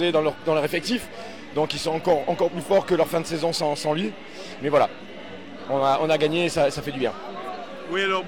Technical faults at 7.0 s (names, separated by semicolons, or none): none